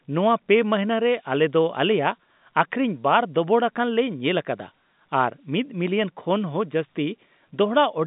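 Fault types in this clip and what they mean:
No faults can be heard in this speech recording.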